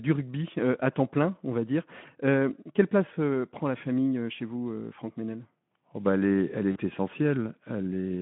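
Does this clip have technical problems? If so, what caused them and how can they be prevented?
Yes. VoIP packet loss concealed by the speech codec occurs at 6.71 to 6.78 s. About 40 ms went missing, which fits two lost frames. The decoder extended its last pitch and filter at falling gain. The speech smears into a fading buzz or coloured noise. Forward error correction or a more stable network link would prevent it.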